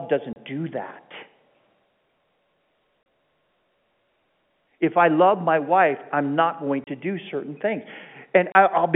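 Packet loss filled with silence: on four occasions a single packet of telephone speech failed to arrive, and the receiver substituted dead air instead of concealing the gap. Each hole lasts 30 ms, which fits one lost 30 ms packet, at 0.33 s just before "do that", at 3.03 s, at 6.84 s between "wife I'm not going" and "do certain things", and at 8.52 s. The abrupt cut-out and resumption leave hard edges within the narrow, telephone-band G.711 sound.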